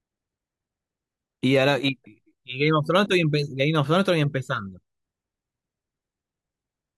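Nothing stood out as a technical fault anywhere in the speech on listening.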